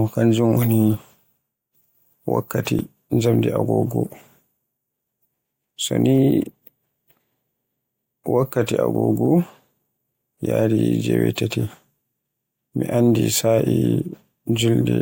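At 2.79 s the speech jumps, likely a dropped buffer (overrun) losing under two milliseconds; the waveform shows an abrupt discontinuity, the spectrogram a thin vertical line.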